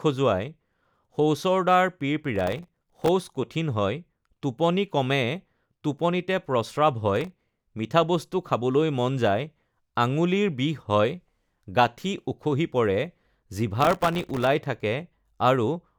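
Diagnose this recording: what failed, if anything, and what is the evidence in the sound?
The failure sits at the driver or buffer stage: processor overload crackle. Three bursts of gritty crackle ride on the speech, from 2.36 to 3.08 s, 7.16 to 7.61 s and 13.81 to 14.47 s, each stopping cleanly once the load eases. The processor could not fill its buffers on time and missed dozens of deadlines over each short stretch. Each miss left a tiny hard-edged silent gap, and the dense spacing points to very short buffers, under a millisecond each.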